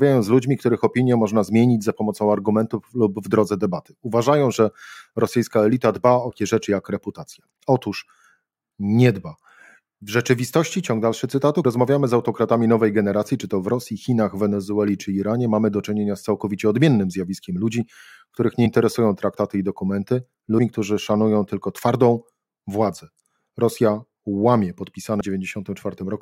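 Speech jumps forward five times, at 6.30, 11.64 (between "rzeczywistości ciąg dalszy cytatu" and "rozmawiamy z autokratami nowej"), 18.65 (just before "traktaty i dokumenty"), 20.58 (between "traktaty i dokumenty" and "którzy szanują tylko twardą") and 25.20 s. These are compressed frames skipped: roughly 100 to 200 ms of audio, several 23.2 ms frames each time, never reaches the output. Unlike a dropout, there is no silence, and unlike a sample-level splice there is no sharp click. Overlapping frames smear each join into a short blip.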